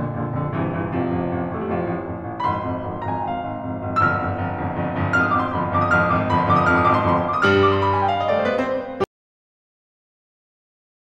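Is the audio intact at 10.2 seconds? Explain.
No. At 10.2 seconds the music sits inside an audio dropout to silence running from 9.04 s to the end of the clip. The input was likely lost while recording continued, so the music cuts off mid-flow into dead digital silence, with no room tone.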